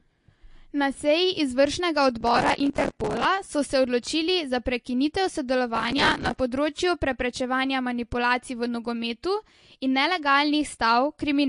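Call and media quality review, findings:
Processor overload crackle, 2.21–3.25 s and 5.76–6.40 s: gritty tearing from repeated missed buffer deadlines, stale audio replayed in chunks fitting roughly 5 ms buffers; dense bursts, unlike isolated clicks.

Throughout: watery, swirly speech with plainly audible artefacts, nothing above 10.5 kHz, likely MP3 compression at a low bitrate around 48 kbps; the frame-to-frame warbling sets it apart from plain low-pass filtering.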